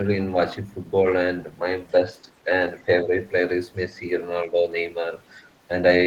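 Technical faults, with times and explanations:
3.04–3.11 s and 4.49–4.56 s, speech suppressed in double talk: the speech level sags by a few decibels, around 5 dB at most, for about 70 ms each time, then recovers. The likely cause is an echo canceller that heard far-end audio arriving at the same moment and pulled down its whole output, including the near talker. On a waveform the envelope narrows briefly; on a spectrogram a short vertical band of fainter energy crosses the speech.
5.26–5.33 s, other side's voice leaking through: a brief trace of a second talker slips into the microphone signal, very faint, roughly 40 dB below the main speech, lasting about 70 ms. It is likely residual echo that the canceller failed to remove from the loudspeaker pickup. On a waveform it is practically invisible; a spectrogram with a wide dynamic range would show a dim, short patch of separate harmonic structure beneath the talker's.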